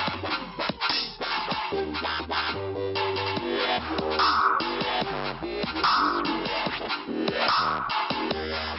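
Nothing is technically wrong with the clip.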